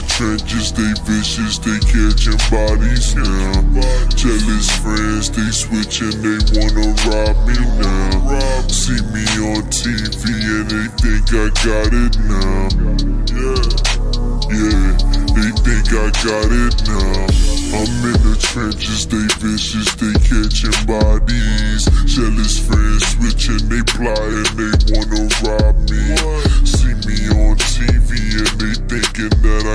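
From start to end, the audio has a wrong sample rate fault: samples are played back slower than they were captured, with no conversion. Everything runs at 0.689 times normal speed and sits 6.45 semitones low, which fits 32 kHz material being played at 22 kHz.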